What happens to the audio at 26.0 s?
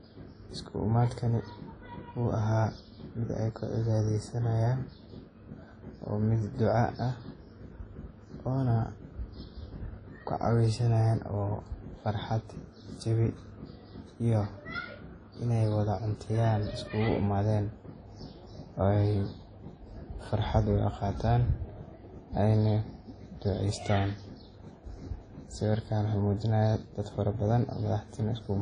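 At 26.0 s the speech carries the same damage heard across the whole clip: a washy, ringing smear with hiss that swells and fades with the voice, likely from WMA compression at a low bitrate around 32 kbps. Its long transform blocks spread quantisation noise over tens of milliseconds and zero out weak lines. A spectrogram shows a hard ceiling near 10.1 kHz and patchy gaps below it.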